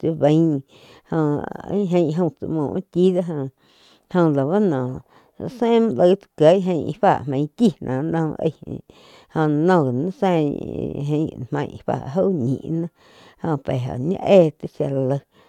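No technical faults are audible.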